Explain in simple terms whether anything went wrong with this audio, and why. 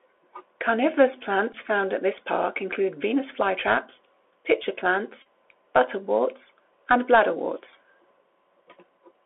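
The speech runs through a Bluetooth CVSD headset codec. The line passes nothing above about 3.4 kHz, so it sounds muffled, with scratchy s sounds and a grainy hiss.

There are two Bluetooth headset packet repeated faults, at 1.53 to 1.55 s before "found at this park" and at 5.22 to 5.26 s after "flytraps pitcher". Lost packets were replaced by repeats of the last one, which gives a brief buzz.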